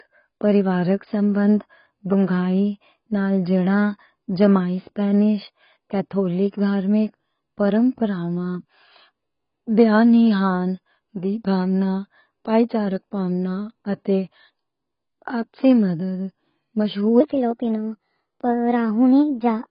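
Throughout the recording, heavy AAC compression is the likely cause: the encoder is short of bits, which fits AAC-LC near 16 kbps, so it discards everything above 5.1 kHz and quantises the rest coarsely. The speech sounds dull and muffled, with warbling, fizzy sibilants.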